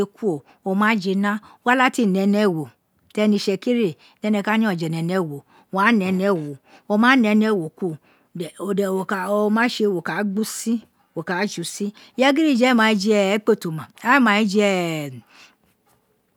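A speech recording with nothing technically wrong to hear in it.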